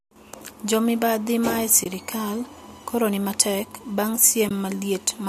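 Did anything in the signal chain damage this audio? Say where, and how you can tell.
Yes. The damage sits at the network-to-codec boundary: AAC frame loss with muting, at 1.84 to 1.86 s and again at 4.49 to 4.51 s. Each gap is about 20 ms of missing audio, which fits two lost frames of a likely low-delay AAC stream at 64 kbps. The decoder zeroed the missing spectra, so the overlapping windows fade the speech out and back in, leaving brief soft-edged holes.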